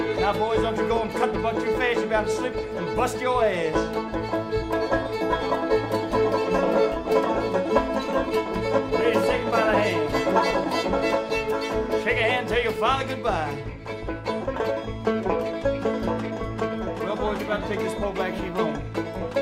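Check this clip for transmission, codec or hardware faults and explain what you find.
There is one fault, a train of clicks between 8.11 and 10.65 s. The likely cause is something such as interference from nearby equipment or a bad connection or power supply, putting the same pulse into the signal over and over. The result is a regular ticking at about 4.35 clicks per second, roughly ten in all, each standing about 10 dB above the surrounding sound and heard as a popping that sits on top of the audio for those two and a half seconds.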